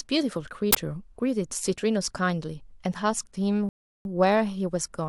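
A speech recording with two playback faults. From 0.73 to 0.75 s an uninitialised buffer fires a loud burst of harsh digital noise, roughly 21 ms long, which fits one 1024-sample block read from memory before audio was written to it. Unlike a click, it is a full block of garbage rather than a single spike. Later, at 3.69 s, a rebuffering stall drops the sound into silence until 4.05 s, adding about 0.36 s while the player waits for more data. Unlike a dropout, no audio is lost: the speech resumes exactly where it paused, so the clip is only stretched in time.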